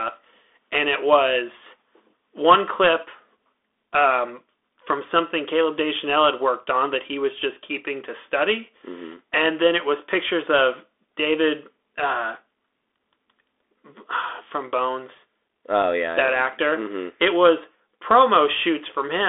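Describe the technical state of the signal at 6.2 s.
At 6.2 s you're hearing the Bluetooth CVSD headset codec, which runs the whole clip. Each sample is a single up-or-down bit with an adapting step, which fits a 64 kbps stream. Speech sits in roughly 300 Hz to 3.6 kHz, with scratchy s sounds and a grainy hiss underneath.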